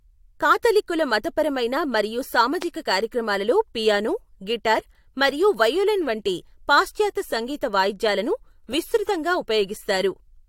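At 2.62 to 2.64 s a single loud pop jumps well above the speech, which carries on unbroken beneath it. Unlike a dropout or edit click, nothing is lost. A voltage pulse, likely from a plug, switch or static discharge, was added on top.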